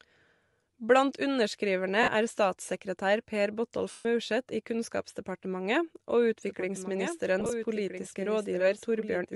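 Throughout the speech, the likely cause is Bluetooth LC3 compression at a fairly low rate, fitting about 48 kbps with 10 ms frames; emptied upper bands refilled with noise leave a plainly audible grainy, breathy edge. Lost LE Audio frames at 2.03 to 2.08 s (50 ms) and 3.91 to 4.05 s (140 ms) make the decoder repeat the last spectrum with scrambled phase, so the sound smears into noise, and the longer gap fades toward silence. From 6.47 s to the end, a doubled audio track, likely from a second capture path, adds a full-band copy about 1.5 s behind and roughly 10 dB quieter, starting abruptly with no room colour. Within that stretch, lost LE Audio frames scatter over about 100 ms from 7.40 to 7.51 s, in very short runs of around 10 ms, giving brief noisy flutters.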